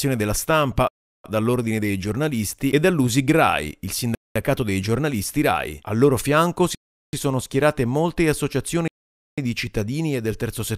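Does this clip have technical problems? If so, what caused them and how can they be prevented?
Yes. The speech drops to full silence four times: 0.88–1.24 s (0.36 s), 4.15–4.36 s (0.21 s), 6.75–7.13 s (0.38 s) and 8.88–9.38 s (0.50 s). These are likely Bluetooth stalls. Radio interference delayed packets, the headphones' buffer emptied, and playback waited for the retransmissions. Each gap is clean silence lasting a fifth to half a second, unlike the short click or smeared filler that packet-loss concealment leaves. Keeping the phone close to the headphones, with no obstruction between them and away from crowded 2.4 GHz traffic, prevents it.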